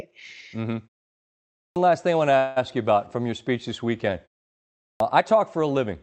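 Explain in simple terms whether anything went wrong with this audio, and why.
Twice, the playback device seems to have dozed off during a quiet stretch and needed a moment to wake. This is a clipped start after a pause. At 1.65 s, just before "last thing I want", roughly a tenth of a second is swallowed, so speech bursts in abruptly. The same happens at 4.9 s.

Between 2.37 and 2.58 s, after "thing I want to", there is a call audio freeze. The likely cause is network data arriving late, leaving the receiver briefly empty-handed. It stretches the last sound into a fading buzz or hiss for about 0.19 s, then resumes with "you about from your" and nothing lost.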